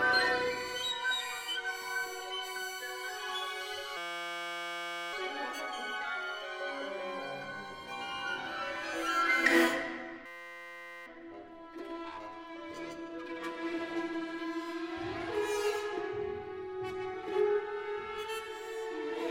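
A steady buzz at about 172 Hz replaces the sound from 3.97 to 5.13 s and again from 10.26 to 11.06 s. This is a system hang loop: the system stalled while the hardware replayed one 5.8 ms slice, which fits a 256-sample buffer, with almost nothing skipped afterward.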